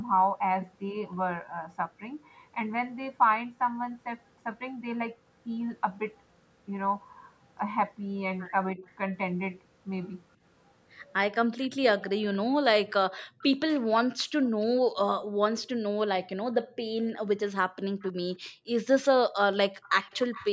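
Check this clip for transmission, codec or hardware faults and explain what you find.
Three kinds of fault are audible, all tied to echo cancellation on a call. The sound carries nothing above 8 kHz, which points to a 16 kHz sample rate in the call's microphone processing.

Speech suppressed in double talk occurs from 8.75 to 8.85 s. The speech dips for about a tenth of a second, by roughly 5 dB. The likely cause is the echo canceller mistaking its own talker for loudspeaker echo while both sides spoke. It then briefly turned everything down. The result is a short, shallow sag in level.

Echo leak is heard three times: 13.17 to 14.65 s, 18.0 to 18.49 s, and 19.82 to 20.5 s. A faint delayed copy of the speech trails the original by about 310 to 315 ms. It sits roughly 25 dB below the speech in the first two cases and about 20 dB below in the last. This is likely loudspeaker sound that the loudspeaker side's canceller failed to remove, so it was sent back.

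The background is gated by the echo canceller four times. The longest spell runs from 13.25 to 15.43 s, with the dropouts totalling about half a second. Shorter ones fall at 16.62 to 16.76 s, 18.49 to 18.67 s, and 19.71 to 19.82 s. In each, the room sound falls away by about 40 dB, almost to silence. The canceller clamped the microphone while the loudspeaker played. The background returns once it lets go.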